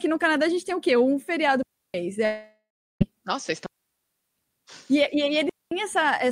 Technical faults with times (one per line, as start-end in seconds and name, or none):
1.63-1.94 digital wireless dropout
2.25-3.02 long network dropout
3.66-4.35 digital wireless dropout
5.49-5.71 digital wireless dropout